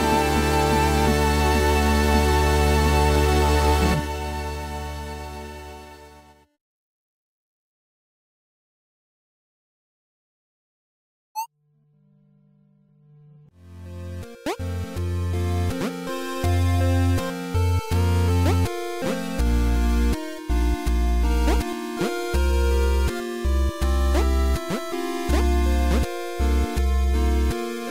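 From 3.16 to 3.96 s, overlap-add ripple: the frames were rejoined with windows whose overlap doesn't sum to constant gain, so the level dips by about 6 dB once per frame, around 400 times a second. Unlike slow gain pumping, the ripple is too fast to follow, giving a rough, robotic buzz.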